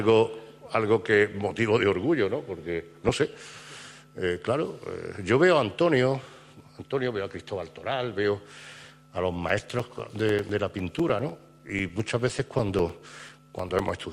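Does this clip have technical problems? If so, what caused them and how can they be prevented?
Yes. From 3.06 to 3.63 s the sound burbles. This is DAB burbling: weak reception let bit errors, around 0.4 percent, slip past error correction and scramble MP2 sub-band levels frame by frame. A better aerial or a stronger multiplex prevents it.

From 9.49 to 13.99 s regular ticks sound ten times a second. These are periodic USB or driver dropouts: every 0.1 s a background task stalls the bus or driver, and a few milliseconds of audio are replaced by silence. Stopping that task or enlarging the audio buffer prevents it.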